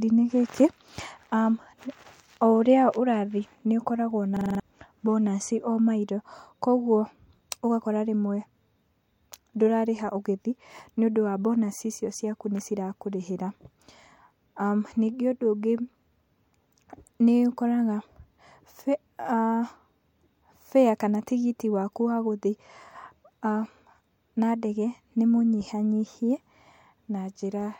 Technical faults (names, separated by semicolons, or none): system hang loop